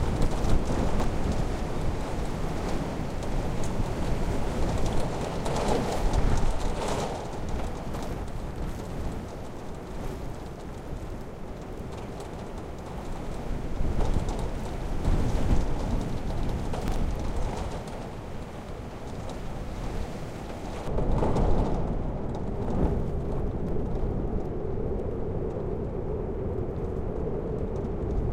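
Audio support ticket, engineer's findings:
Chunks out of order, 0.88 to 1.04 s: short jumbled stutter. A 40 ms block lands three chunks late, so it plays after material that should follow it. Nothing missing, just reshuffled. Suspect the buffering or write stage.

Chunks out of order, 16.88 to 16.96 s: same thing, smaller. One 40 ms chunk arrives a single slot late, giving a brief scrambled blip with hard joins. Same component, same ordering slip.

Two isolated sharp clicks at 19.95 s and 23.69 s, each a thin tick with no gap you can hear. Likely dropped samples: a fraction of a millisecond missing from the stream, so the waveform jumps straight to a later value. Too short to lose any sound, just the discontinuity.

De-emphasis applied wrongly, 20.88 s to the end: the sound turns dull and muffled, with treble sloping away smoothly, about 11 dB down at 10 kHz relative to 1 kHz. A de-emphasis filter is acting on audio that wasn't pre-emphasised, or it's running twice. 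Check the playback or decode chain's filter settings.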